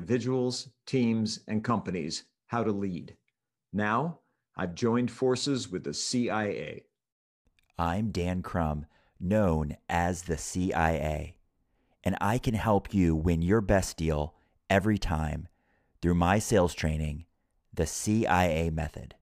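Speech, with no audible faults.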